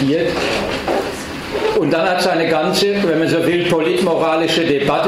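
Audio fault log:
No audible faults anywhere in this audio.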